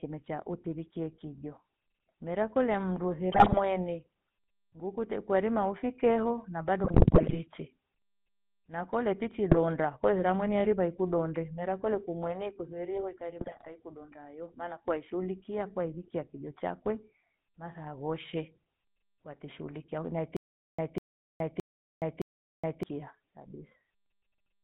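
Right from the start the whole thing carries GSM full-rate codec damage, and it's plainly audible. The band runs only from about 150 Hz up to 3.6 kHz, and the voice has that buzzy, gravelly edge you get when a vocal-tract model is fed a thinned-out pulse excitation. It all points to the old 13 kbps full-rate coder.

Then come four bursts of GSM bit errors, at 3.32 to 3.60 s, 6.84 to 7.41 s, 9.50 to 9.59 s and 13.38 to 13.81 s. Corrupted filter, pitch and gain values are reaching the decoder, so frame after frame the spectrum twists or the level jumps. You hear squawks, pops and gargling. The longest and nastiest is the one around 7 s, and the damage fits an error rate of a few percent on a weak radio link.

From 20.37 to 22.83 s there's a stutter with silent gaps. A fragment of about 197 ms plays, then about 419 ms of dead digital silence follows, and the pattern repeats every 617 ms, four times in all. 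The cause is likely a stalled player or stream that replays its last fragment on each retry and then runs dry. Whatever should have played in that stretch is simply gone.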